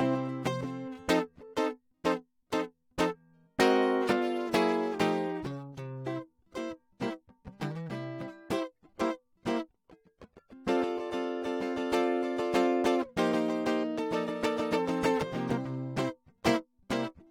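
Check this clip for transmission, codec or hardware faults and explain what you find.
Nothing stood out on listening to this music clip.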